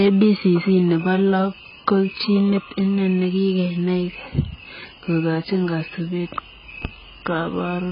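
Speech runs through the whole recording with nothing above 5 kHz and a dull, smeared quality. Sibilants turn fizzy and sustained vowels warble, which is the sound of heavy AAC compression. The likely cause is AAC-LC coding at a very low bitrate, somewhere near 12 kbps. A plain low-pass filter would also remove the top end, but it would leave the remaining band clean. Here the coding leaves holes in the spectrum or fills bands with substitute noise. Just after "kokachiin kasupeet", between 6.85 and 6.88 s, a single loud pop rises about 15 dB above the speech while the talking continues underneath it. It is likely a voltage pulse, such as a switch, static discharge or driver glitch, entering the signal chain. A dropout or edit click would instead break or cut into the sound. This pop has a short, sharp thump shaped by the downstream circuits and lands on top of uninterrupted audio.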